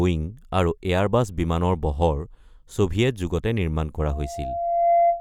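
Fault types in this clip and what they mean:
Loudspeaker feedback squeal: a 687 Hz tone swells over about a second from 3.98 s to the end, finishing about 5 dB above the speech, as the microphone re-amplifies its own loudspeaker.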